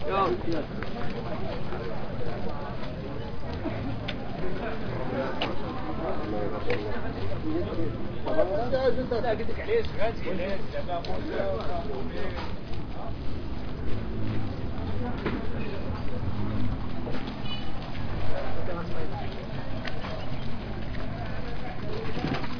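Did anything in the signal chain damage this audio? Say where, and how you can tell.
No, nothing in the chain has left an audible mark on these sounds; the signal holds steady throughout, with no breaks, distortion or level disturbances at any point.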